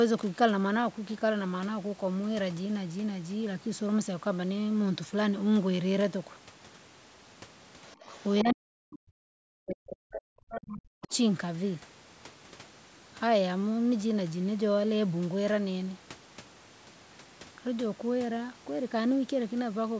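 At 7.88 to 7.93 s and again at 8.09 to 8.42 s, faint scraps of a second voice appear: the other side's voice leaking through, likely because the echo canceller missed part of the loudspeaker signal. The first scrap sits far below the main speech, the second somewhat louder. A final brief scrap follows at 11.11 to 11.16 s.

From 8.42 to 11.12 s, the main talker's speech is suppressed in double talk. While the other side speaks, it dips deeply, at its worst by around 40 dB. The likely cause is the canceller ducking everything because it cannot separate the talker from the echo. What sets this apart from a dropout is that the dips track the other voice.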